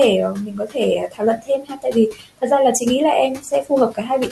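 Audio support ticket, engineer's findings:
Video or display buzz, throughout: 50 Hz buzz with hash above it, plus a steady 15.6 kHz line-rate tone, roughly 20 dB under the speech. Screen or video cable coupling into the audio path. Spectrogram: 50 Hz harmonic comb, thin line at 15.6 kHz.

Noise suppressor artifacts, throughout: background dips between phrases and swells under speech. The suppressor's per-frame, per-band gain is chasing the noise floor. Spectrogram: mottled, flickering patches where steady noise should be. Room noise, about 19 dB down, is normal.

Speech cut by the noise suppressor at 0.34–0.77 s, 1.08–1.96 s, 2.12–2.43 s, 3.38–3.71 s and 3.91–4.1 s: quiet speech swallowed, drops of about 14, 15, 18, 12 and 14 dB. The suppressor is misclassifying soft speech as noise. Waveform: sudden envelope notches inside phrases.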